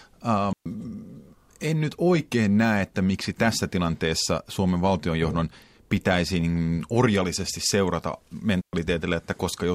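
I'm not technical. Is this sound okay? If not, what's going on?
No. The speech cuts out completely twice, from 0.53 to 0.66 s and again from 8.61 to 8.73 s, each gap lasting about an eighth of a second. The sound simply drops to near silence and comes back, with no crackle or hiss around it. This is a digital wireless dropout: the wireless microphone's signal briefly lost too much data, so the receiver quietly muted the audio until the signal recovered.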